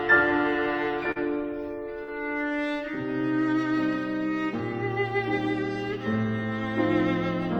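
At 1.11 to 1.19 s and again at 2.04 to 2.11 s, short concealed packet loss occurs. About 40 ms of audio arrived too late each time. The decoder extended the preceding sound to cover the gap, then blended back. Each gap is heard as a brief smear or wobble.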